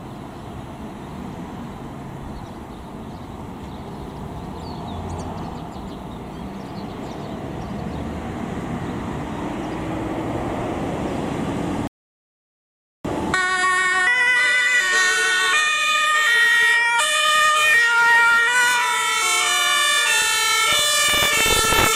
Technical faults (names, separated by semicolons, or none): rebuffering stall